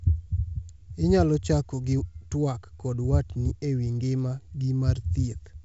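Nothing is technically wrong with this speech clip, which comes through G.722 wideband telephone coding with sound reaching up to about 7.7 kHz.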